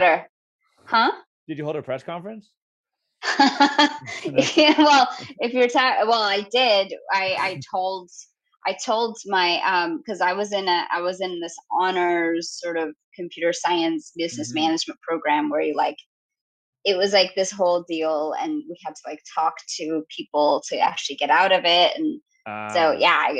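There are no technical faults to describe at any point in the audio.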